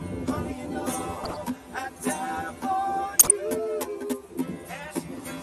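The sound runs through a channel delay throughout, with comb filtering. One channel lags the other by roughly 10 ms. When the two are summed to mono, their shared content cancels at evenly spaced frequencies. The first notch falls near 40 Hz, and the rest repeat about every 100 Hz upward. The result is a fixed, hollow, phasey colour on the whole clip. It does not move or fade.

There are also two bursts of corrupt frame decoded. The first runs from 1.24 to 1.37 s. The second runs from 3.18 to 3.31 s. Each lasts about 130 ms, which fits damage spread across several consecutive compressed frames. Flipped bits made the decoder apply wrong gains or misread codes. Energy lands at the wrong frequencies as a short chirp or noise burst. The first peaks at about -20 dBFS. The second is much louder, at about -5 dBFS.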